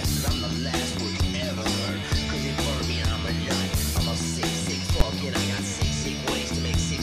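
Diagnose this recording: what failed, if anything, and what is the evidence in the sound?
A processing fault shows as invalid numbers at full scale at 5.00 s, where a single sharp bang of about 10 ms stands out. A floating-point calculation produced infinite or undefined values, and when those were converted to the fixed-point output format they were clamped to the largest possible sample value. That pins the output at full scale for one short block. Because the block is so brief, the onset and release merge into one loud report rather than two pops with silence between.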